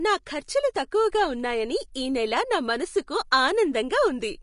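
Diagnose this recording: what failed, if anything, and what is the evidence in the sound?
The failure sits at the codec stage, and the likely cause is Vorbis compression. Throughout the speech there is a grainy, hissy quality in the upper range, and nothing sounds above 10.5 kHz. On a spectrogram the treble ends in a flat shelf, with blotchy, speckled energy just beneath it. At low bitrates the encoder quantises the residue above its spectral floor so coarsely that fine detail turns into noise of similar level, which fits a bitrate around 35 kbps.

Pre-echo appears at 1.94 s and again at 3.07 s. Each is a brief hiss, roughly 10 to 12 ms long, that arrives just before a sharp attack and softens its edge. On a waveform a noisy ramp leads into each transient, and on a spectrogram a thin vertical smear of broadband energy comes before the onset. The transform spreads its quantisation noise across the whole block, so noise sized for the loud attack also fills the quiet moment before it.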